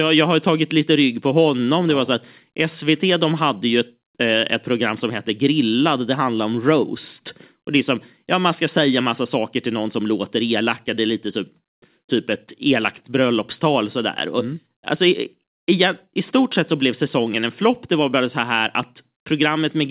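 No technical faults can be heard anywhere in this speech recording. It comes through a working mu-law G.711 telephone path, so nothing reaches above 4 kHz, and a faint quantisation hiss rides with the level of the speech.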